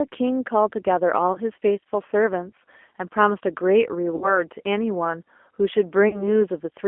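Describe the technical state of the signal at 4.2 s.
At 4.2 s the signal is inside a stretch of VoIP packet loss concealed by the speech codec, running from 4.16 to 4.41 s. About 60 ms of audio never arrived, which fits three 20 ms packets, and the decoder filled the hole by repeating its last pitch and vocal-tract shape at falling gain. The result is stretched, smeared sound that fades, then weak, distorted sound until the frames rebuild. On a spectrogram, the harmonics run flat and frozen before thinning. The waveform shows a decaying, overly regular envelope.

Underneath this sits the G.729 codec at 8 kbit/s, which is plainly audible at this moment as well. The speech is resynthesised from a predictor filter and sparse pulses, so it sounds slightly rough and synthetic. The band is confined to roughly 250 Hz to 3.4 kHz, so a spectrogram shows nothing above about 3.4 kHz and little energy at the very bottom. 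Fine waveform detail looks pulse-like rather than natural.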